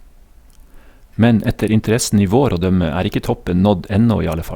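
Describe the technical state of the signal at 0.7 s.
At 0.7 s the signal is intact, with no audible fault at that moment.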